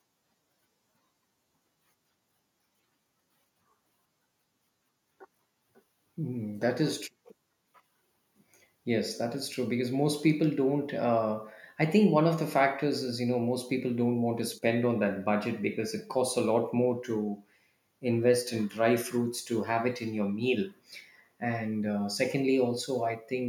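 A speech recording with nothing technically wrong to point to.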